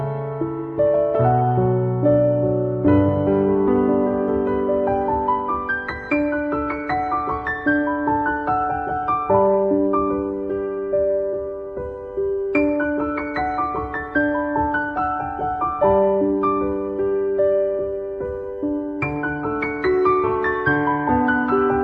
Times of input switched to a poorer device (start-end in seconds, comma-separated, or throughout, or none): none